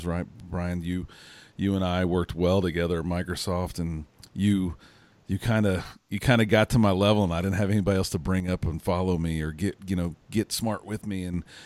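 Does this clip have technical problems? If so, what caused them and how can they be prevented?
Yes, the speech dips twice, and it sounds like one channel dropping out. From 8.40 to 8.48 s, after "have anybody else to" and before "up and follow me", the level falls abruptly by about 6 dB, then again from 11.05 to 11.34 s after "get you know get". That halving is what you'd expect when one side of a stereo pair goes silent and the rest gets summed to mono, likely a loose cable or a flaky input. Checking connectors and monitoring both channels separately while recording would prevent it.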